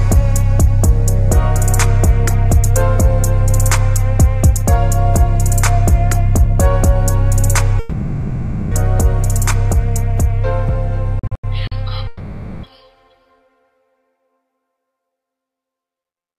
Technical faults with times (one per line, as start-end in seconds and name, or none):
7.79-8.74 long network dropout
11.19-11.74 repeated packet loss (robotic sound)
12.07-12.66 long network dropout